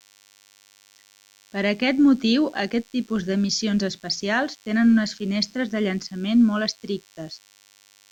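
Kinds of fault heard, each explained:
DECT cordless phone buzz: A steady, thin buzz sits under the speech for the whole clip, with radio bursts arriving 100 times a second. A nearby cordless handset or base station transmits these short pulses, and the audio circuitry rectifies them into an audible tone rich in harmonics. The buzz stays well below the speech, at about 35 dB down. A spectrogram shows a comb of horizontal lines at 100 Hz and its multiples running unbroken across the clip, and a zoomed waveform shows small repeating spikes spaced 10 ms apart.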